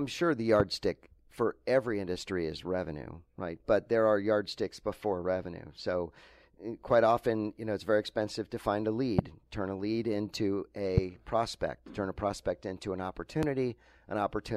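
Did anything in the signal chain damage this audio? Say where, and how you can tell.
Yes. There is a loud pop, a single sharp thump at each of 0.60, 9.19, 10.98 and 13.43 s, each lasting about 25 ms and standing roughly 15 to 20 dB above the speech. The likely cause is a voltage step in the analogue wiring, from a connector, switch or static discharge, which the downstream circuits shape into a short pulse. The speech carries on unbroken beneath each pop, which separates it from a buffer or network dropout, where audio goes missing.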